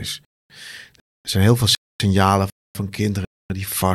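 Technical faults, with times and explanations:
0.25–0.50, 1.00–1.25, 1.75–2.00, 2.50–2.75 and 3.25–3.50 s, gap between chunks: the speech arrives in half-second pieces with 250 ms of dead silence wedged between each, so nothing's missing but it stutters along in hard-edged holes every 0.75 s.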